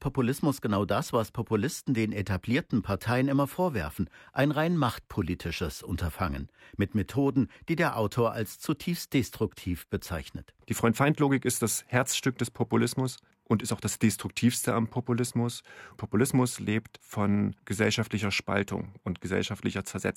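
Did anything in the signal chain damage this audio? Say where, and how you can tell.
No, nothing audible points to damage at any stage of the chain: the level, tone and timing hold steady throughout, with no break, distortion or added noise to trace back to wiring, conversion, buffering, processing, transmission, storage or playback.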